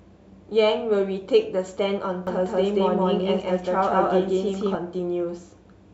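From 2.27 s to 4.75 s the speech is heard twice, a doubled audio track. A second full-band copy runs about 200 ms behind the first, at roughly the same loudness. It has no decay and no room colour, so it sounds like a crisp, slapped repeat rather than an echo. It begins and ends abruptly. The likely cause is the same audio reaching the mix twice, once through a slower path.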